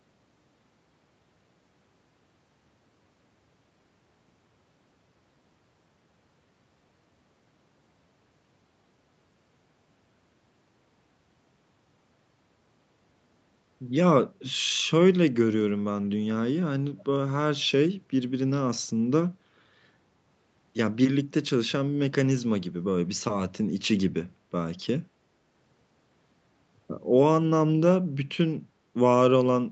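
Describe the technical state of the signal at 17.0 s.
A brief, faint repeat of the speech slips in between 16.98 and 17.04 s: a delayed copy trailing the live sound by 324 ms, sitting roughly 30 dB below it, so it registers as a ghostly scrap rather than a clear second voice. This is likely an echo leak. The far side's loudspeaker was picked up by its microphone, its echo canceller failed to remove that pickup for this short moment, and the residue was sent back down the call.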